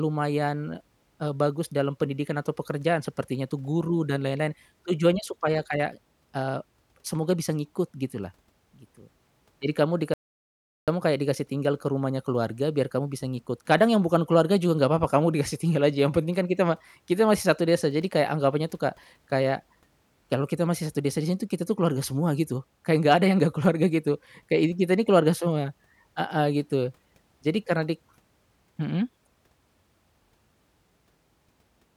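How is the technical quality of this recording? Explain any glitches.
The recording has one clear glitch. An audio dropout to silence runs from 10.14 to 10.88 s: about 0.74 s of speech vanishes into dead digital silence, likely from the input briefly disconnecting or muting while writing continued.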